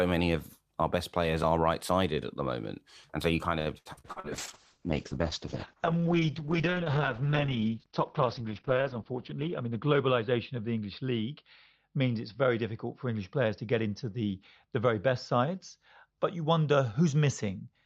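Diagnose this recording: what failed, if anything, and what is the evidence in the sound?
Network stage: repeated packet loss (robotic sound) from 3.59 to 4.27 s, just after "so you kind". Six gaps, the longest 74 ms, leave about 240 ms missing. Concealment stretches the last sound across them, covering 42% of the span. The speech turns choppy, with pieces missing.

Codec stage, driven by the network: a call bitrate drop starts at 4.11 s and lasts to the end. The encoder falls from 48 to 7 kbps and holds the lowest rate for 5.2 s. Bandwidth shrinks from 20 kHz to 6 kHz. The speech sounds muffled, rough and watery.

Buffer stage: a jitter buffer speed-up from 9.11 to 9.66 s. The receiver had queued too much audio. It trimmed pitch-period slices, around 70 ms in all, so playback runs at 110% speed. Pitch stays the same, but the speech sounds briefly hurried.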